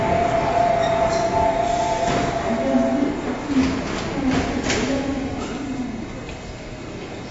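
AAC compression runs through the whole clip, from start to finish. Nothing is present above 7.6 kHz, so the top octaves are simply gone and the sound is dull. What remains carries a smeared, warbling texture, with a fizzy edge on sustained and noisy parts. The likely cause is an AAC-LC encoder at a low bitrate, around 24 kbps by the sound of it, forced to lower its cut-off and quantise coarsely.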